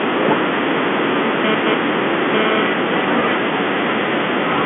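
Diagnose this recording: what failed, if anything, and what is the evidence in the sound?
The failure is GSM phone buzz getting into the analogue wiring, from 1.44 s to 2.63 s. It's a hard, raspy buzz at about 217 Hz, loaded with harmonics, sitting only about 2 dB below the speech, so it nearly matches it. A nearby 2G phone was bursting during a data transfer, and some stage in the audio circuit rectified those radio pulses into audio, which is why it starts and stops on its own. The phone-line band limit, with nothing above 3.6 kHz, comes through unchanged under the buzz.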